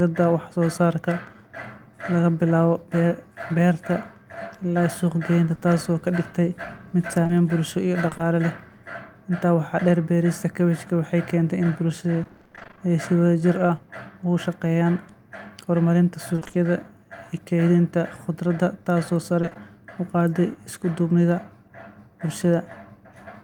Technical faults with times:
5.55-5.59 short concealed packet loss
7.23-8.21 repeated packet loss (robotic sound)
12.23-12.79 repeated packet loss (robotic sound)
16.35-16.55 repeated packet loss (robotic sound)
19.41-19.57 repeated packet loss (robotic sound)

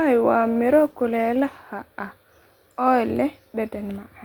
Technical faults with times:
0.43-1.87 call bitrate drop

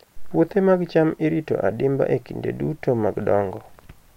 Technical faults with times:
none

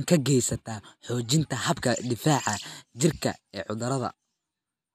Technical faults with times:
none

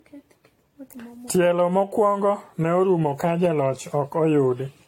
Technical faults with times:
0.00-4.87 generation loss

